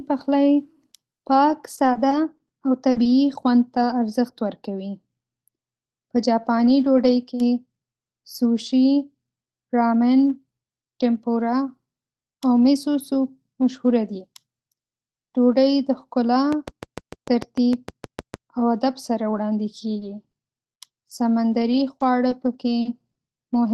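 From 0.89 to 3.91 s there are scattered short gaps. Packets went missing here and there, about ten of them. The longest hole is around 40 ms. In all, 200 ms of audio was lost and 260 ms was rebuilt by stretching the last sound forward. Speech stays clear. Small ticks, smears and hiccups break through it.

From 16.53 to 18.35 s, a train of clicks runs over the speech. The pulses come at a regular 6.61 per second, about fifteen in total. They peak about 10 dB above the speech. The same sharp shape repeats each time, in pauses too. The likely cause is electrical interference or a struggling interface. The ticking stops just before "او ادب سره وړاندې".

Right after "او ادب سره وړاندې", scattered short gaps return, from 19.99 to 23.17 s. About seven holes appear, none longer than roughly 40 ms. Here 160 ms went missing and 240 ms was patched. The effect is lighter than at the start, but the same brief hiccups and smears recur. 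Throughout, the top end stops near 12 kHz, which fits an Opus call link.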